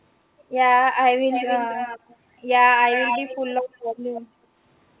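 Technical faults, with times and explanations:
1.32–2.16 s and 2.88–3.37 s, echo leak: a delayed copy of the speech trails it by 271 ms, about 10 dB down at first and then about 5 dB down, likely leaking from a far-end loudspeaker past its echo canceller. Unlike room reverberation, it is a distinct repeat rather than a smooth tail, and it is band-limited to 4 kHz like the rest of the call audio.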